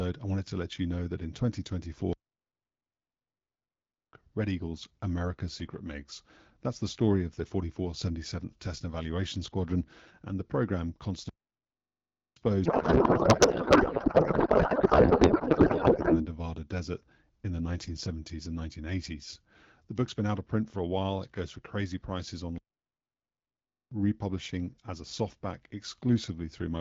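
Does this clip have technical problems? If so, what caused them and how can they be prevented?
Yes. The speech has playback stalls at 2.13 to 4.13 s, 11.29 to 12.36 s, and 22.58 to 23.92 s. The sound cuts out in mid-flow for 2 s, about 1.1 s, and about 1.3 s. It then carries on. The likely cause is the player running short of data or having its audio thread blocked, so the output goes silent until it catches up. Larger jitter buffers and a high-priority audio thread prevent this.

From 12.65 to 16.27 s there is a codec payload misread. The speech turns into garbled noise and warble that barely tracks it. This is octet-aligned AMR being read as bandwidth-efficient. The decoder takes the bits as valid frames, but every field sits in the wrong place. Before and after, the AMR wideband (HD Voice) codec is clear, which fits 12.65 kbit/s. Agreeing on the payload format in call setup prevents this.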